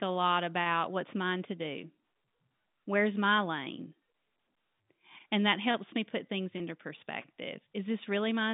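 Right after "helps me put things", at 6.58 to 6.60 s, there's packet loss with pitch repetition: a 20 ms gap filled by a looped pitch period, heard as a brief buzzy hold.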